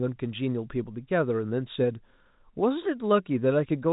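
Nothing stood out on listening to this speech, which comes through a telephone-band channel with no content above about 3.8 kHz.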